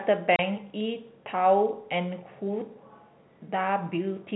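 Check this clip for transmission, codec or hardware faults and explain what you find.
One transmission fault is audible in this speech clip, over a telephone-band G.711 path. Packet loss filled with silence hits from 0.36 to 0.39 s: a 30 ms hole, which fits a single lost packet, replaced by silence with hard edges, unlike concealment, which would smear or repeat sound across the gap.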